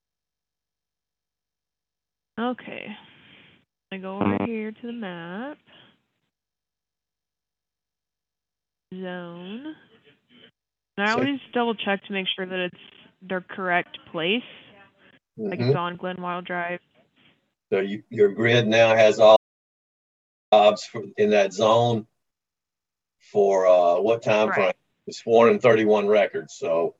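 An audio dropout to silence runs from 19.37 s to 20.52 s, cutting the sound off mid-flow for about 1.15 s. Unlike a natural pause or a noise gate, the gap holds no room tone at all, just silence, which points to a likely loss of the input signal.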